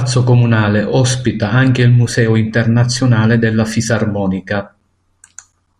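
No technical faults detected.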